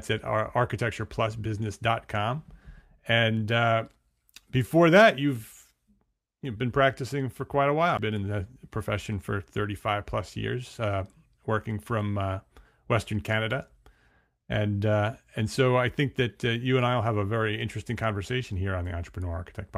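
At 7.97 s there is a CD skip in the speech. The laser lost its place on the disc's spiral and landed on a different turn. Playback mutes for a very brief moment, heard as a tick. The speech then resumes from another point.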